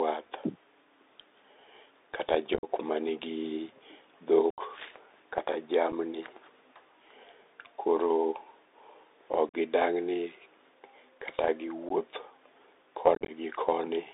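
Speech heard through a Bluetooth CVSD headset codec. On a spectrogram, energy is confined to roughly 300 Hz to 3.7 kHz over a granular hiss floor. The one-bit delta coding, whose step size adapts, can't keep pace with sharp high-frequency bursts, so s sounds turn scratchy and loud bright moments distort. Unconcealed Bluetooth headset packet loss punches hard-edged holes at 2.54–2.65 s, 4.50–4.61 s, 5.92 s, 9.49–9.54 s, 11.89–11.92 s and 13.15–13.31 s. The first and last are broken dropouts scattered over about 90 ms and 135 ms. On the waveform each shows up as abruptly flat gaps where short packets of audio never arrived over the radio link and nothing was filled in, heard as short holes with abrupt edges.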